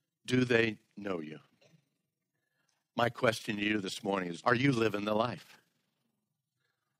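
Speech with overlap-add ripple running the whole way through: the level pumps by about 6 dB around twenty times a second, giving a rough, fast flutter. The frames were windowed and summed back with an overlap that doesn't add to a constant gain.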